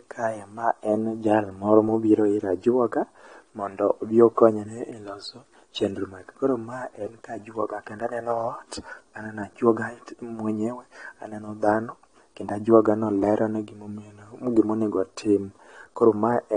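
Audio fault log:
throughout, AAC compression: speech is dull, with nothing above 9.7 kHz and plainly audible smearing, likely from coarse AAC-LC quantisation, which fits about 32 kbps.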